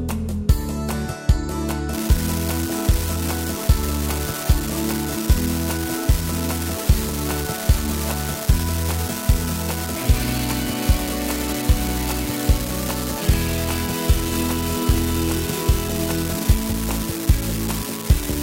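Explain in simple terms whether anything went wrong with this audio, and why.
From 1.93 s to the end there's an unreliable data bit: one flaky digital line flips at random, adding a steady crackle that continues even through the pauses.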